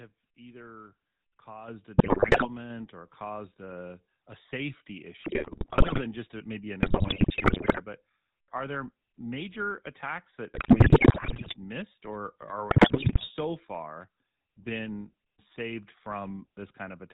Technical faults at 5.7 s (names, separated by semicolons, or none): GSM full-rate codec; GSM bit errors